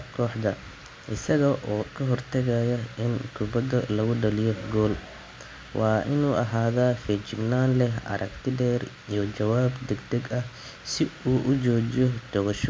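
Nothing in this speech recording stood out as a technical problem on listening.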